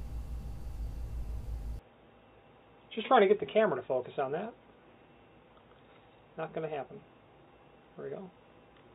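From 1.79 s to the end the sound suddenly turns dull and boxy, nothing above 3.8 kHz, with a faint new noise floor, likely an input switched to a poorer device.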